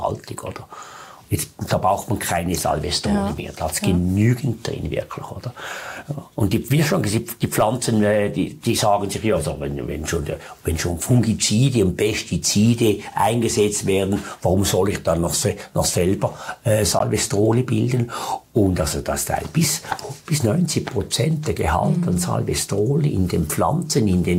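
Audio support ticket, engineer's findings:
Short gap at 16.99 s, about 13 ms of silence, then sound resumes as if it had kept playing. Likely a Bluetooth dropout; the length fits one late packet to the headphones.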